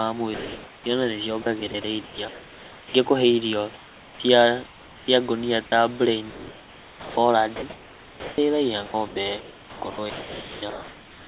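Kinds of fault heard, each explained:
Comfort noise in place of the background: From 0.34 to 0.86 s, the real room background, about 24 dB below the loud speech, turns into a smooth, featureless hiss with the texture gone but at the same level, and from 3.74 to 5.08 s it again gives way to a smooth, synthetic hiss. The likely cause is discontinuous transmission: the sender stopped sending during the pause, and the receiver filled the gap with synthetic noise shaped roughly like the room.
Sound chopped by the voice detector: Between 1.42 and 2.94 s, about 0.9 s of audio is replaced, and from 6.3 s to the end about 3.4 s is. In both stretches quiet parts of the speech drop in and out. This is likely the sender's voice detector repeatedly switching transmission on and off, with the gaps filled by comfort noise.
Sound dropped by the voice detector: At 5.66 to 5.72 s, a 60 ms gap replaces the sound with steady noise, and about 30 ms of actual speech disappears before the signal returns. 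This likely happened because the voice detector judged that soft moment to be background and briefly stopped sending. The receiver then substituted comfort noise, which carries the same 4 kHz band limit as the rest of the G.711 call audio.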